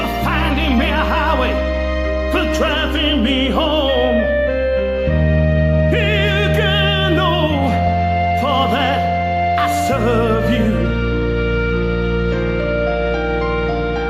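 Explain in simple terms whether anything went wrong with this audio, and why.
Nothing went wrong here.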